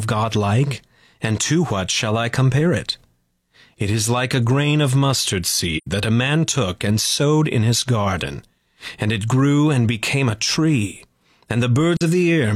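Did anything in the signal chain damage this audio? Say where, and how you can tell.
Yes. AAC frame loss with muting at the codec stage: soft gaps at 5.77–5.87 s, between "a grain of mustard" and "that a man took", and at 11.97–12.02 s.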